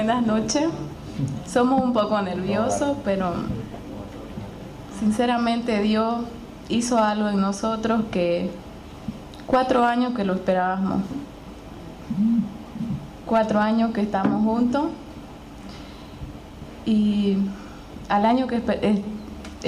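No technical faults can be heard anywhere in the recording. Nothing in it calls for a time or a value to be marked.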